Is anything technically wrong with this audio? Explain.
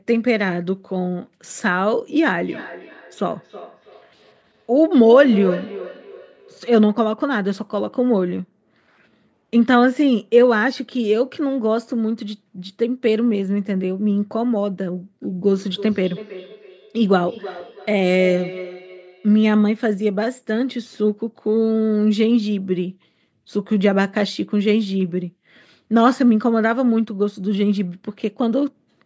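Yes. Feedback echo between two devices occurs from 2.33 to 6.7 s and from 15.53 to 19.58 s. A second device in the room replays the speech, this microphone picks it up again, and the echo canceller cannot remove sound it did not play. The result is repeats roughly every 300 ms, peaking about 13 dB and about 15 dB below the speech.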